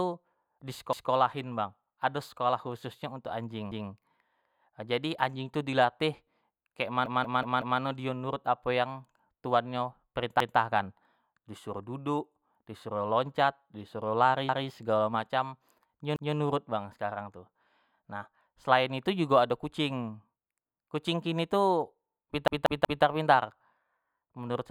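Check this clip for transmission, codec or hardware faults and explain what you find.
The speech has repeated buffer faults at 0.93, 3.72, 7.06, 10.40, 14.49, 16.16 and 22.48 s. New audio arrived late, so playback reused the last 186 ms block, which fits an 8192-sample buffer. Each repeat is a stutter with hard joins, played four extra times at 7.06 s and three at 22.48 s.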